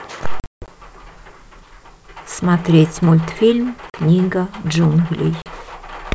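From 0.40 to 0.69 s, packet loss on an ADPCM call drops 220 ms in hard-edged holes, the longest 160 ms. Brief 40 ms gaps follow at 3.90 and 5.42 s. The decoder's predictor and step size drift, so speech resumes slightly distorted, then settles.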